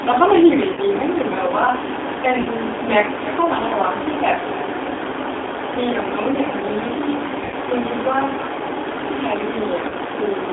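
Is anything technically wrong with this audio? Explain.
Yes. The whole clip carries G.729 codec damage: at 8 kbit/s the speech is rebuilt from a vocal tract filter, pitch predictor and sparse pulses, so it sounds rough and synthetic, squeezed into roughly 300 Hz to 3.6 kHz. Unlike plain band-limiting, it adds a buzzy, artificial texture.

VoIP packet loss concealed by the speech codec occurs at 0.73 to 0.80 s, 2.41 to 2.47 s, 7.44 to 7.55 s and 9.89 to 9.93 s, covering about 40, 40, 80 and 20 ms. The decoder repeats its last pitch and filter at falling gain, so the speech smears into a fading buzz instead of dropping to silence as a dropout would.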